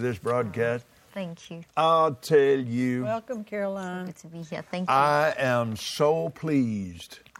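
Nothing in the audio stood out as a technical problem on listening.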